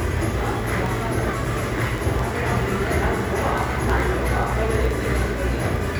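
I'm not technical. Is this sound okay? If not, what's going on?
No, it has a problem called word clock ticks. From about 0.12 s to 5.97 s there's a steady run of sharp ticks, about twenty a second, so roughly a hundred in total, some louder than others. The audio was passed between two pieces of gear running on separate clocks that drift slightly apart. Each time they slip past each other, a sample gets dropped or doubled, and that slip is what makes each tick.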